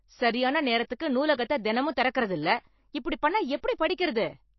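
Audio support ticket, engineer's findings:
Speech, throughout: plainly audible watery, swirling artefacts, nothing above 5.8 kHz. Likely MP3 compression at a low bitrate: weak frequency lines zeroed and returning frame to frame, treble cut at a fixed frequency. A plain low-pass filter would dull without swirling.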